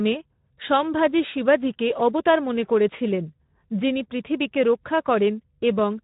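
Speech runs through Speex codec damage for its whole length, plainly audible as a hoarse, noisy grain, consistent with a narrowband bitrate of about 11 kbps starving the excitation. A spectrogram shows an empty band above 3.8 kHz and blurred, fuzzy harmonics.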